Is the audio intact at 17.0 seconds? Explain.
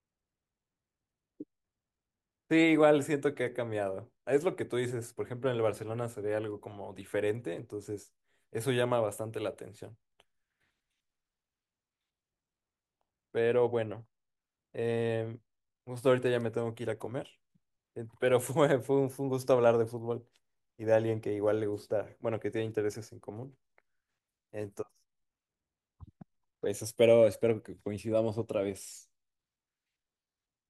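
Yes, the speech at 17.0 seconds plays through intact, with no audible fault at that moment.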